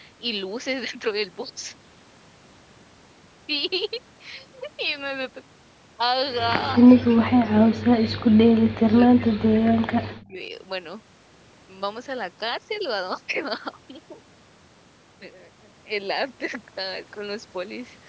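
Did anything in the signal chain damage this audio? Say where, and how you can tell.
Yes, in call processing. The sound ducks roughly 30 dB at 6.77–7.95 s and 40 dB at 8.42–10.39 s, likely speech suppressed in double talk.

There's also a faint echo leak at 10.2–10.24 s, a copy about 35 dB down and 235 ms late, likely loudspeaker pickup the canceller missed.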